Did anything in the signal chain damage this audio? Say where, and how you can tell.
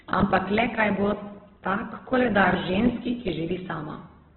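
Yes, at the codec stage: the whole clip shows heavy Opus compression, likely from encoding at a very low rate in its CELT music mode. Nothing reaches above about 4.2 kHz, so the speech is cut to narrowband and sounds muffled from start to finish. With so few bits, CELT fills starved bands with folded or noise-like content rather than leaving gaps, so voiced sounds come out grainy and rough, which fits a rate near 8 kbps.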